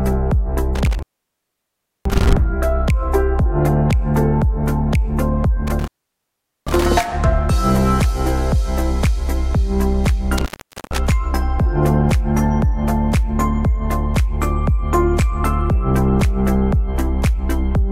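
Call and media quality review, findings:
Intermittent contact. Dropouts at 0.75–2.33 s, 5.67–6.87 s and 10.38–10.98 s. Crackle at each edge. Line open about 1.03 s, 0.79 s and 0.45 s in turn, with faint hiss in the gaps. Probable component: loose cable or plug in the capture chain. Mechanism: the connector briefly loses contact, the signal path opens, then reseats with a scratchy transient. Open spells shorten across the clip.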